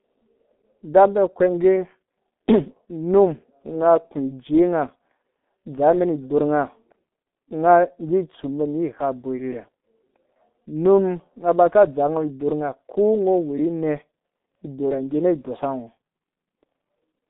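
Throughout, the speech sounds muffled and hoarse, with smeared consonants and nothing above 3.8 kHz. This is heavy G.723.1 codec damage, fitting a bitrate near 6 kbit/s.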